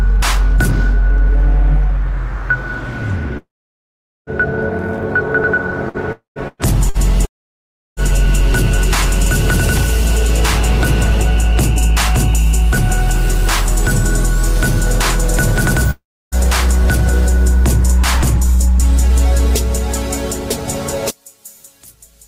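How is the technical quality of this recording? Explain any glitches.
The recording has clear network damage and a stereo polarity problem near the end.

From 3.37 to 4.30 s, 6.12 to 6.39 s, 7.25 to 8.00 s and 15.91 to 16.35 s, the audio stops for between about a quarter second and nearly a second. A short, fading buzz carries the last sound before mostly silence. This points to a long network dropout, likely a stretch where no packets arrived. The waveform shows a brief tail collapsing to a flat line, and the spectrogram shows a smeared band that goes blank.

Between 5.89 and 6.98 s there is repeated packet loss, with robotic sound. Three short holes, the longest 115 ms, are patched by stretching the previous sound, so about a fifth of that span is concealed. The result is choppy. The spectrogram shows repeated frozen, striped slices.

From 21.10 s to the end, the centre of the sound nearly disappears when summed to mono, dropping by about 27 dB and leaving a faint residue. 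One channel is likely inverted. The mono spectrogram turns faint.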